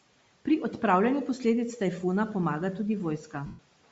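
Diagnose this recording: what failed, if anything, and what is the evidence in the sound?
Bluetooth LC3 compression, throughout the clip, at the codec stage. The speech carries a plainly audible breathy, grainy edge in the upper band, most likely from LC3 coding at a low rate. The damage is in line with roughly 32 kbps and 10 ms frames. At that rate the encoder discards much of the high spectrum and the decoder refills it with shaped noise, so the texture above the voice's core sounds hissy rather than detailed.

Lost LE Audio frames, from 3.46 to 3.59 s, at the network (radio link) stage. For about 130 ms the speech turns into a noisy smear that sags in level, which fits a run of about 13 consecutive frames missing. The LC3 decoder conceals each gap by repeating the last good spectrum with randomised phase signs and then fading it. That turns clear speech into a smeared, decaying wash until real frames arrive again. 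The room noise, about 27 dB below the speech, is part of the recording rather than a fault.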